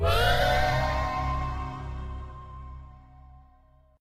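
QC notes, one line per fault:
0.35–0.42 s, AAC frame loss with concealment: a single coded frame of about 43 ms never reached the decoder, which fits one AAC frame, so the decoder had nothing real to play for that stretch and rebuilt it from the last good spectrum, reusing its energy with scrambled or guessed phase. Because the gap is this short there is no fade to silence. Instead the sound turns briefly smeared and noisy, with a phasey blur, before clean decoding resumes.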